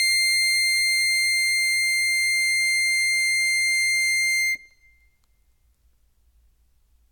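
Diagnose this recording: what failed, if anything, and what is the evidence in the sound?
Nothing in this music recording points to a failure at any stage, so there's no fault to diagnose here.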